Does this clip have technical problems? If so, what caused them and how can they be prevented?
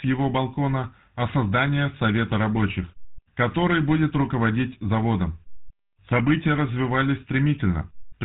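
Yes. Throughout the speech there is GSM full-rate codec damage. The voice is modelled as a vocal-tract filter driven by sparse, regularly spaced pulses, which produces a buzzy, gravelly roughness that a plain band-limit alone wouldn't cause, and nothing survives above about 3.9 kHz. The character fits 13 kbps full-rate coding. To prevent it, record or transmit over a wideband path, or use a modern codec at an adequate bitrate.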